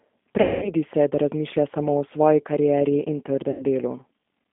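From start to finish the speech carries G.729 codec damage. The sound points to an 8 kbit/s G.729A link: the spectrogram shows energy confined to roughly 200 Hz to 3.5 kHz, and voiced passages sound plainly rough and synthetic, with smeared, grainy harmonics rebuilt from a coarse filter and pulse model.

From 0.41 to 0.71 s, VoIP packet loss concealed by the speech codec stretches the last sound into a buzzy tone or coloured noise that fades. This fits about 210 ms of lost packets. The spectrogram shows a frozen, repeated spectrum decaying, then weak, distorted onset afterwards. A shorter gap of about 90 ms does the same from 3.51 to 3.63 s. The waveform sags there and recovers slowly.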